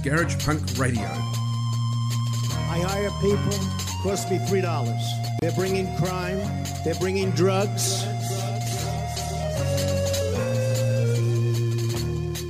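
The audio has a gap at a join of encoded pieces. At 5.39 s the sound drops out for about 28 ms, until 5.42 s. The edges are smeared by the codec. Separately encoded sections were joined untrimmed, leaving encoder delay and end padding. The sound then resumes where it stopped.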